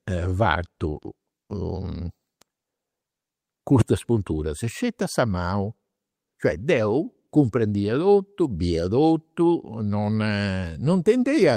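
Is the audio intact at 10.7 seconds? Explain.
Yes, at 10.7 seconds the speech plays through intact, with no fault to be heard at that moment.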